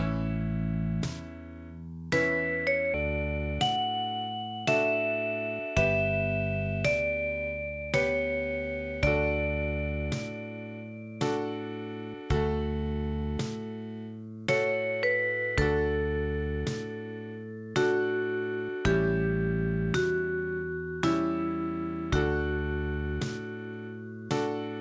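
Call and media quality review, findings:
Skip ahead at 2.94 s: about 0.7 s of audio missing, sides joined with no gap or fill. Audio dropped in transit or by jitter buffer overflow while later audio was queued. Unlike a dropout, nothing silent or concealed.

Jitter buffer speed-up, 3.03–3.78 s: audio runs about 15% fast at unchanged pitch, roughly a tenth of a second trimmed as repeated pitch-period cuts. Buffer draining excess delay, not resampling.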